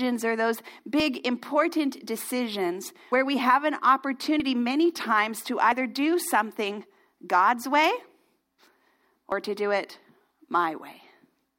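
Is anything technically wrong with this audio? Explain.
Yes. At 3.12, 4.4 and 9.32 s there are points where the sound jumps forward, losing roughly a tenth of a second at the first and about 40 ms at the others, likely dropped buffers (overrun): unread samples were overwritten and the remaining edges spliced together. Unlike a dropout, no silent gap separates them.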